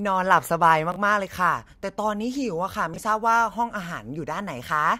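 A short speech recording with chunks out of order at 0.92 to 0.96 s and again at 2.94 to 2.98 s. In each spot a 20 ms slice of audio plays one chunk late, swapping places with its neighbour. The sound stutters briefly. On a waveform, three abrupt discontinuities bracket each swapped pair. A spectrogram shows thin vertical broadband lines there, with harmonic and formant tracks stepping out of sequence.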